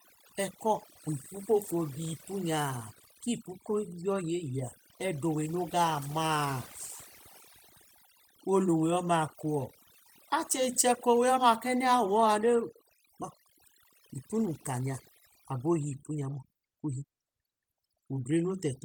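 Overdone noise removal runs throughout the speech. Aggressive noise reduction shuts frequency bands near the noise floor, leaving twinkling specks in near silence.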